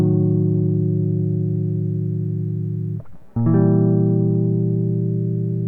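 No technical faults can be heard anywhere in the music. There is nothing in the audio to place on a timeline.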